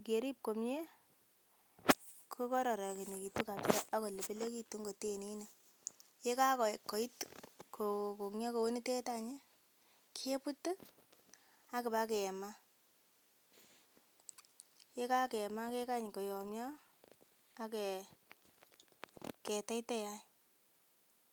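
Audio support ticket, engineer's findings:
Engineer's findings: no faults found in this speech recording.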